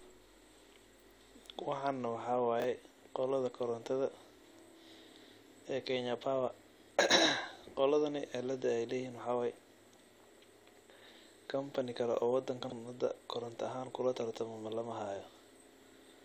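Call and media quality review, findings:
Chunks out of order at 2.60–2.64 s, 4.18–4.22 s and 12.64–12.72 s: 20 ms blocks played late, the last displaced further, giving jumbled speech with hard joins.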